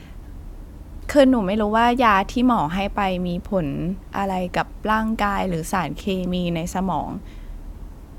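No technical faults are audible anywhere in this recording.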